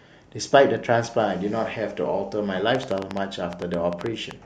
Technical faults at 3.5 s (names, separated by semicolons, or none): train of clicks